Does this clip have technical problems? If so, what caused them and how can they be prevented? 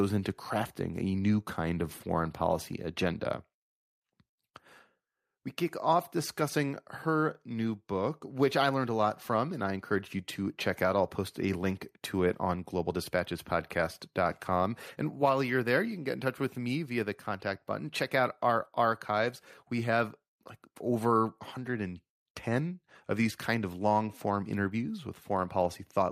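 No, the signal shows no technical problems, so there is nothing here that needs preventing.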